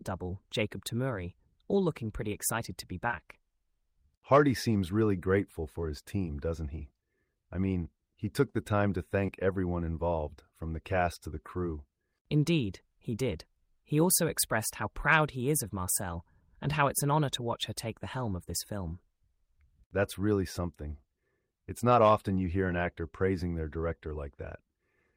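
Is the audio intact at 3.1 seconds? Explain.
No. Short concealed packet loss hits at 3.07 to 3.11 s and again at 3.11 to 3.14 s, just after "pretty excited to be". About 20 ms of audio failed to arrive in time for each gap. The receiver covered the holes by extending the preceding sound for roughly 17 ms and 13 ms before easing back into the real signal. The result is a brief smear or wobble across about 70 ms, and a short consonant there may be lost.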